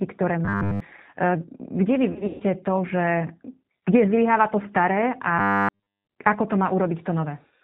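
The whole clip passes through the G.729 codec at 8 kbit/s. It rebuilds speech from a vocal-tract filter, a pitch predictor and a few pulses per frame, discarding everything above 4 kHz. The damage is plainly audible: the speech sounds muffled, rough and faintly synthetic.

From 0.45 to 0.80 s, new audio likely arrived too seldom, so short buffers were replayed in place of the skipped audio. This is robotic sound from repeated short buffers. A rigid, metallic buzz at 100 Hz, which fits a 10 ms buffer, replaces most of the sound while roughly following its contour.

Between 2.12 and 2.43 s, VoIP packet loss was concealed by the speech codec. About 200 ms of packets went missing across 280 ms, the longest gap being 140 ms. The decoder extended its last pitch and filter, so the speech smears into a fading buzzy tone or coloured noise and stays weak just afterwards.

From 5.39 to 6.07 s, the same repeated-buffer fault returns more severely. 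Essentially all of the sound becomes the fixed 100 Hz metallic drone for about 0.7 s.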